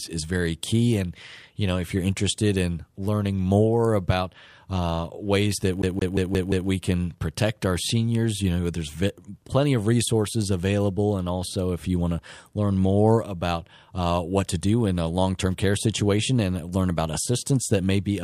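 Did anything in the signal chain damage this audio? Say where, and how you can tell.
Yes, at playback: from 5.82 to 6.69 s the speech gets stuck like a CD stuck on one turn. The same 174 ms slice repeats five times in an even stutter, with a short mute at each jump where the scratched disc throws the laser back a track.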